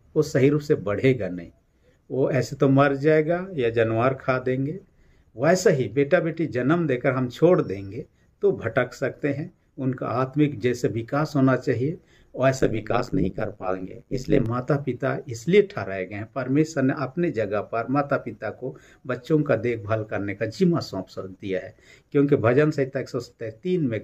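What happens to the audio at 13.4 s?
A metallic buzz with extra tones around each note chops through the sound from 12.57 to 14.46 s, the level pulsing around a hundred times a second with swings of about 60 dB. This is overlap-add ripple: windowed frames were rejoined with overlaps whose gains don't sum evenly, so loudness dips once per frame.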